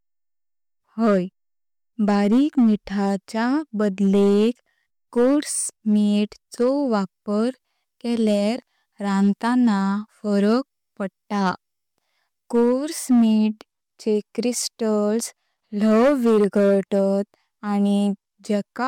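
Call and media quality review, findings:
Hard clipping, throughout. Speech peaks cut flat, harsh fuzz on louder syllables. Gain stage overdriven about 8 dB past converter/format ceiling; a few percent of samples clipped, flattened tops adding high harmonics.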